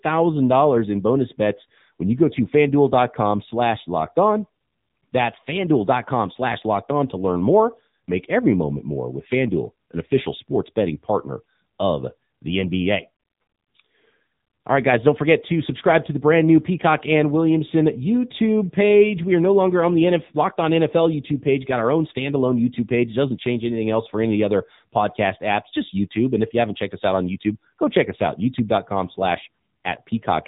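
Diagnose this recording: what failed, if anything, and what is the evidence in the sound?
The fault sits at the codec stage: AMR narrowband mobile codec compression across the whole recording. The speech has nothing above 3.8 kHz, so sibilants and breath lose their top end. The codec damage is plainly audible. Voiced sounds come out buzzy and synthetic. AMR-NB resamples to 8 kHz and rebuilds speech from a vocal-tract model driven by a few pulses per 5 ms subframe. That degree of buzz fits one of its lower modes, near 8 kbps.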